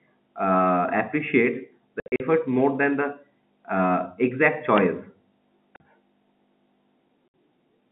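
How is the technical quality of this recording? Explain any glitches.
The speech is carried over a G.711 telephone line, band-limited to roughly 150 Hz to 3.6 kHz, and it is broken up by packet loss filled with silence at three points. Between 2.0 and 2.2 s, after "uh appreciates" and before "more than the uh", about 140 ms goes missing in scattered gaps, the longest 60 ms. Shorter holes follow at 5.76 to 5.80 s (40 ms) and 7.28 to 7.34 s (60 ms). The receiver inserted silence for each lost packet, so every gap is a multiple of what sounds like 20 ms packets. The cuts start and stop abruptly, leaving hard edges and a stuttering, chopped quality.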